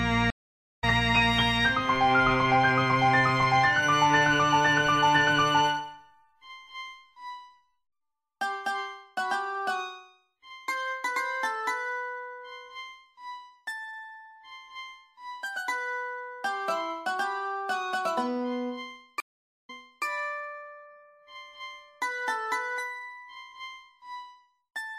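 At 0.30 s a stream reconnect breaks the audio. The connection dropped, the player went quiet for about 0.51 s, then restarted its decoder mid-stream. Playback resumes roughly half a second past where it left off, so that stretch is skipped. A second stream reconnect at 19.20 s brings 0.47 s of silence. This time the audio resumes 0.37 s earlier, replaying material already heard. The waveform shows each gap as a flat line, and the spectrogram shows a blank vertical band ending where the sound fades back in.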